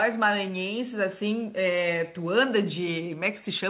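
No technical faults can be heard in this speech.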